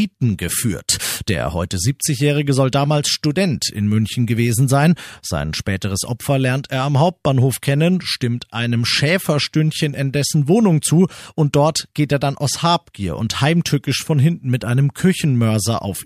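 Nothing goes wrong anywhere in this recording, so there's no technical fault to point to at any moment.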